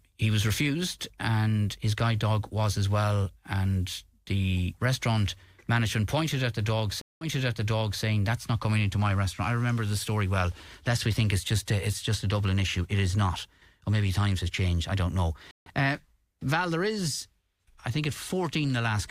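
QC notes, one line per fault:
7.01–8.03 s, stream reconnect. Right after "pointed at the dog", the audio drops out for 197 ms. It then resumes 0.82 s earlier, so that stretch repeats. The connection broke, and the player reconnected and started a fresh decoder. The server resent a burst from before the break.
15.51–15.69 s, stream reconnect. After "changed I don't know", there is 150 ms of silence. Playback picks up about 0.15 s later, so a short piece is skipped. The player rejoined the live stream further on.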